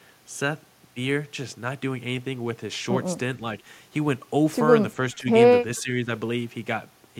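Speech suppressed in double talk hits this speech recording at 5.14–5.28 s and 5.77–6.09 s, where the level dips by about 10 dB, likely because an echo canceller mistook overlapping talk for echo. Echo leak appears at 5.77–5.82 s as a very faint copy of the speech arriving about 413 ms late, likely residual loudspeaker echo the canceller failed to remove.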